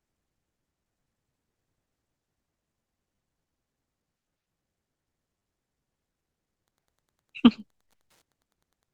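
At 3.16–3.18 s and again at 5.39–5.41 s the speech briefly stutters: a repeated buffer. New audio did not reach the output in time, so the device replayed the last block of samples, here two extra times, with a hard join at each repeat. The repeating fragment is very short, which fits a 10 ms buffer, so it comes across as a brief buzzy click. Roughly 20 ms of real speech is lost at each point.

From 6.62 s to the end of the clip a steady ticking sits under the speech: Wi-Fi interference. A nearby Wi-Fi radio's periodic beacon, repeating every 102.4 ms, is being rectified by the audio circuitry and leaks into the signal as a tick close to ten times a second. It stays at a low level, about 40 dB below the speech.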